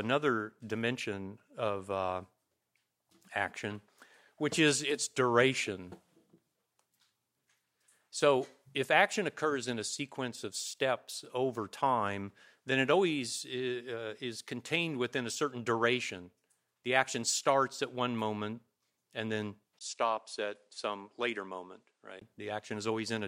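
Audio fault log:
19.79–22.21 s, input switched to a poorer device: after a 20 ms gap, sound turns dull with nothing above 10.5 kHz, a few dB quieter, with faint new hiss; likely a change of input device.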